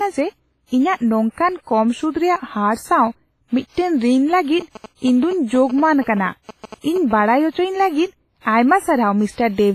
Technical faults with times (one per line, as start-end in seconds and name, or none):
0.00-9.74 WMA compression
4.61-7.21 GSM signalling bursts